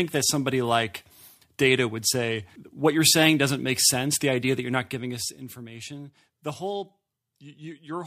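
No technical faults can be heard anywhere in the speech.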